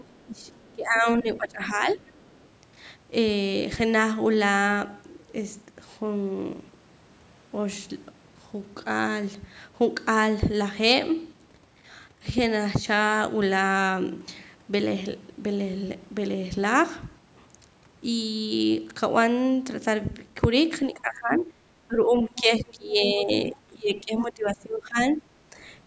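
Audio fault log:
0.00–0.04 s and 2.23–2.47 s, other side's voice leaking through: a faint second voice sits about 25 dB, then about 40 dB, below the talker. It is likely loudspeaker echo the canceller missed, and it shows as weak extra harmonic traces.
0.04–0.52 s and 0.73–2.11 s, speech suppressed in double talk: the talker's level sags by up to about 20 dB, likely from the echo canceller ducking both voices. The waveform envelope visibly dips and the spectrogram thins.
20.93–23.30 s, 23.50–24.98 s and 25.15–25.56 s, speech suppressed in double talk: the voice dips by up to about 15–20 dB. It looks like a carved-down envelope.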